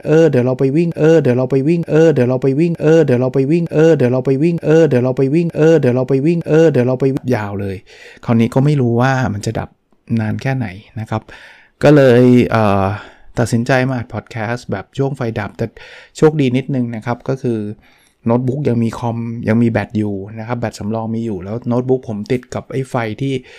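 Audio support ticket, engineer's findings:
Broken-record loop, 0 to 7.17 s, already under way when the clip opens. A 0.92 s speech fragment repeats exactly, back to back, seven times. Likely a stalled player or stream resending its last buffer. The speech that belonged there is lost.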